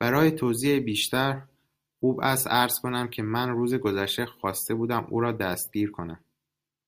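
Nothing technically wrong turns up anywhere in this bit of speech, so there's no fault to point to.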